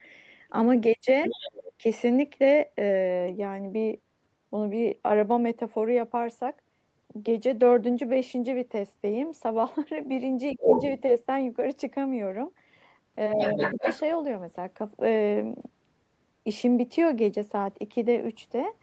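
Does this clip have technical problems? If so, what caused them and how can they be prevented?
Yes. Other side's voice leaking through: the loudspeaker playback was likely not fully removed by the echo canceller, so a second voice comes through alongside the speech from 1.22 to 1.72 s at about 10 dB below it, from 10.59 to 11.02 s at about 5 dB above it, and from 13.33 to 14.0 s at about 5 dB below it. Better acoustic isolation, such as a headset, or a stronger echo canceller would prevent this.

Speech suppressed in double talk: when both sides spoke at once, the canceller likely could not separate the talker from the returning echo and pulled the whole signal down. The main speech dips by roughly 10 dB from 1.27 to 1.32 s, 10.54 to 10.72 s and 13.35 to 13.85 s, each dip overlapping a stretch of leaked voice. A headset or a canceller with better double-talk detection would keep the talker's level steady.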